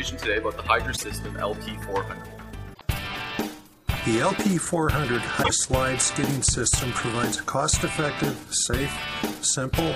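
Brief chirps or squawks break through the audio at 0.96–1.04 s, 2.71–2.81 s and 5.40–5.51 s: damaged data in a compressed stream, where the decoder misreads corrupted frames and resynchronises.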